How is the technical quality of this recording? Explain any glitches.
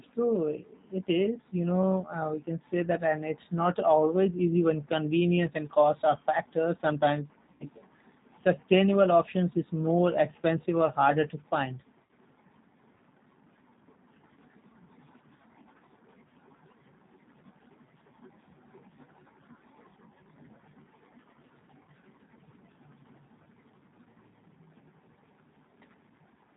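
The recording is intelligible but clearly degraded, with codec damage throughout and two short dropouts.

G.729 codec, throughout: The speech sounds slightly rough and synthetic. This codec rebuilds speech from a vocal tract filter, a pitch predictor and a few pulses per 10 ms frame, so fine detail is replaced by a coarse approximation, and nothing above 4 kHz survives. That leaves the audio narrow and dull, and the damage is plainly audible. This fits an 8 kbit/s G.729A stream.

VoIP packet loss concealed by the speech codec, 7.52 to 7.65 s and 12.05 to 12.11 s: At these points the speech briefly smears into a buzzy tone or coloured noise that fades, instead of cutting to silence. The first gap covers about 80 ms of lost audio, which fits four lost packets, and the second covers about 40 ms, which fits two. The decoder filled each gap by extending its last pitch and filter settings while lowering the level frame by frame. 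Because each frame builds on the previous one, the speech stays weak and distorted for a short time after the gap ends.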